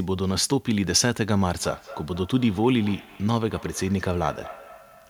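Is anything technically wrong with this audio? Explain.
Yes. From 1.58 s to the end, feedback echo between two devices: a second device in the room replays the call into this microphone, beyond the echo canceller's reach. Speech returns roughly every fifth of a second, about 19 dB down, appearing on a spectrogram as faint, evenly spaced copies of each syllable.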